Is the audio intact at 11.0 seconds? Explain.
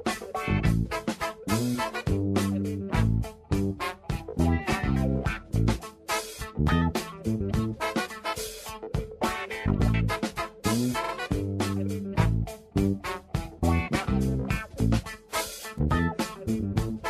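No. From 11.03 to 11.12 s there are repeated frames: a block of about 46.4 ms, consistent with two compressed frames, is played twice more. This produces an audible stutter and lengthens the audio by 92.9 ms.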